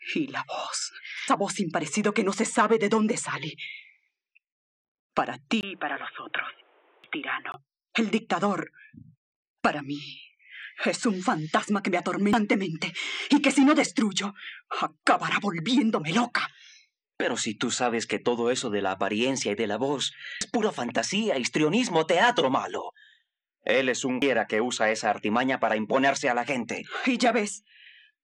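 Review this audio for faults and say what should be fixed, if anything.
Damaged data in a compressed stream: short glitches at 1.28, 7.04, 12.33, 20.41 and 24.22 s, where the decoder loses frame sync. Check transfers with checksums and use error-protected transport.

Input switched to a poorer device: after a 20 ms gap at 5.61 s, the sound turns dull until 7.54 s, with nothing above 3.8 kHz, a faint new background noise and no level change. This is likely a switch to a poorer input device; a plain low-pass filter would not bring its own noise. Lock the recording input and disable automatic headset profile switching.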